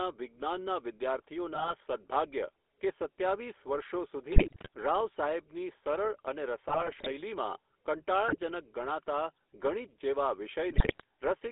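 The whole speech clip runs through the GSM full-rate codec, and you can hear it plainly: a buzzy, gravelly grain from the pulse-driven vocal tract model, squeezed into a phone line of roughly 300 Hz to 3.5 kHz, which fits the old 13 kbps full-rate coder. GSM bit errors then hit at 1.54–1.73 s, 4.32–4.68 s, 6.68–7.11 s, 8.28–8.36 s and 10.70–11.04 s. In those spots, corrupted filter, pitch and gain values warp the spectrum and jolt the level frame by frame, so the speech breaks into squawks, pops and gargling.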